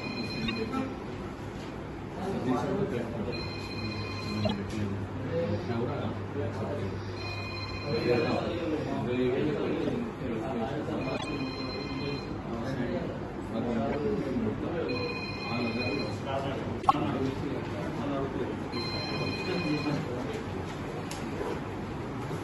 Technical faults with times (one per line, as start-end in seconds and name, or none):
0.42-0.50 corrupt frame decoded
4.41-4.53 corrupt frame decoded
9.81-9.95 corrupt frame decoded
11.15-11.25 corrupt frame decoded
13.89-13.95 corrupt frame decoded
16.80-16.95 corrupt frame decoded